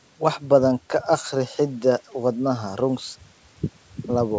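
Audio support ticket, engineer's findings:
No fault found in this speech clip. Call path shows the expected band limit, with nothing above 8 kHz, consistent with G.722 wideband coding and normal mic processing.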